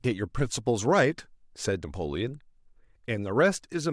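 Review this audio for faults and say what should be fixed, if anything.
Nothing stood out on listening to this speech recording, so there is nothing here that needs fixing.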